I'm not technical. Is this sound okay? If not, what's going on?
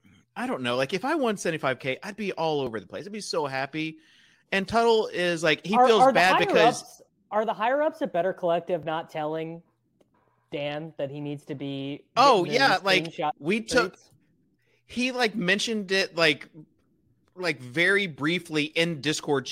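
Yes, this speech recording sounds fine, with no technical problems to point out. Nothing goes wrong at any moment, so there's nothing here that needs fixing.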